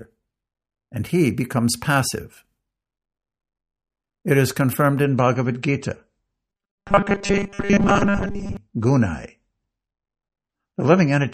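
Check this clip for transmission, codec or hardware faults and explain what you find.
Two faults are present, and they overlap in the second half of the speech.

From 5.04 s to the end, the quality changes suddenly and codec artefacts rise, with no gap at the switch. This is an adaptive stream dropping to a lower bitrate after the connection slowed. The abrupt change and the rise in codec artefacts fit a change from MP3 at 128 kbit/s down to 32 kbit/s, which forces the encoder to discard high frequencies.

From 6.50 s to 8.57 s, inside that degraded stretch, the voice becomes a rigid metallic buzz at a steady 200 Hz that only loosely tracks the speech. This is robotic sound from repeated short buffers. The likely cause is that fresh audio arrived too rarely, so the player kept looping the most recent fragment. A 200 Hz buzz points to loops about 5 ms long. Most of the real audio in that stretch seems to have been replaced by these repeats rather than played.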